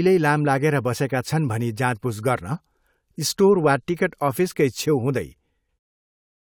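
No technical problem can be heard in this speech recording. Near the end, from around 5.8 s, the level eases away in a smooth fade-out with no click or hard edge.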